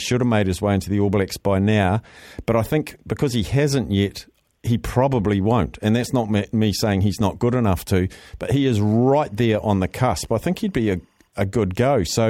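From 8.54 to 11.27 s, linear timecode running at 24 frames per second leaks from a neighbouring track or cable into the speech channel. This timecode bleed appears as a faint chirping warble, switching between tones near 1 and 2 kHz, roughly 45 dB below the voice.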